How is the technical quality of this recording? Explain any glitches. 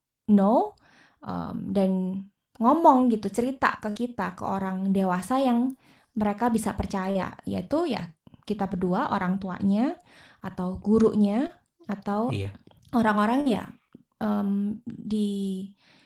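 The recording has five packet-loss glitches of two kinds, all in the speech.

Burst of packet loss at 3.89–3.97 s and 13.41–13.47 s: several packets in a row failed to arrive in time. The receiver stretched the last received sound and faded it, for about 53 ms and 47 ms. When real audio returned, about 60 ms and 40 ms of speech had been skipped, so the speech jumps ahead. On a spectrogram, the harmonics or noise freeze into flat, dimming bands before an abrupt resumption. In the waveform, the envelope decays smoothly and then snaps back.

Short concealed packet loss at 7.11–7.17 s, 11.47–11.51 s and 12.43–12.47 s: individual packets went missing, about 40 ms at the first point and 20 ms at each of the others. The decoder patched each gap by extending the preceding sound, then crossfaded back into the real signal. Each patch is heard as a quick smear or wobble. On a spectrogram, each one shows as a narrow slice of blurred, repeated texture. 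The waveform shows a short, overly regular stretch with a soft join on either side.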